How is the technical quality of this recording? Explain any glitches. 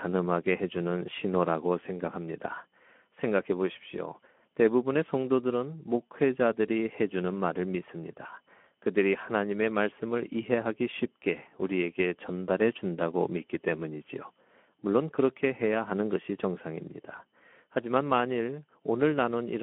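The technical quality is poor, with plainly audible Speex codec damage throughout the speech. Too few bits for the excitation signal leave voices noisy and hoarse, which fits a setting around 11 kbps. Telephone-style band limiting alone only sounds thin between 200 Hz and 3.4 kHz, with nothing above 3.8 kHz. This clip also has the gritty CELP texture on top.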